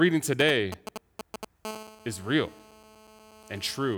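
From 0.4 to 1.45 s there are GSM signalling bursts: a nearby 2G phone's handshake pulses get rectified, giving a galloping dit-dit-dit of 217 Hz ticks, roughly 10 dB under the speech. Then from 1.65 to 3.95 s the phone is in a call, so it settles into a steady GSM phone buzz, a raspy 217 Hz drone full of harmonics, about 20 dB under the speech.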